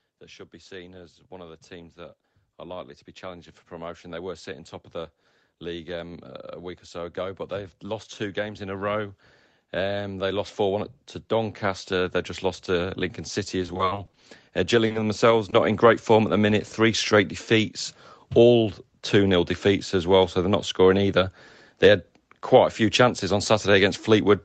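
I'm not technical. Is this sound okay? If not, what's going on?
No. There are four kinds of fault in this speech recording.

Automatic gain rising: three times the call's volume control decided the speech was too quiet and slowly turned it up, so voice and background swell together. This runs from 0.18 to 6.3 s, just before "week or"; again from 6.93 to 9.07 s, right after "week or"; and from 9.71 to 15.92 s, ending just before "form at the minute."

Repeated packet loss (robotic sound): between 13.63 and 14.24 s, small pieces of audio kept failing to arrive. Each hole was patched by stretching the sound just before it, and the next hole followed quickly. About a third of that stretch is patched, so it sounds choppy and robotic.

Short stall from a late packet: at 14.86 to 14.92 s, one piece of audio arrived late. The receiver held the last sound for about 0.04 s while it waited, so that moment drags with a slight buzz or dip. 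Nothing is lost.

Short concealed packet loss: at 14.92 to 14.96 s and 15.50 to 15.54 s, about 0.02 s of audio never arrived. The gap was filled by continuing the previous sound, which leaves a brief smear or wobble.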